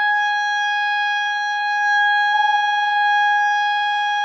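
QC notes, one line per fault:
2.31–2.35 s, short concealed packet loss: about 20 ms of the music never reached the decoder in time, so the receiver stretched the preceding sound for around 13 ms before blending back into the real audio, leaving a brief smear or wobble against the call codec's 8 kHz ceiling.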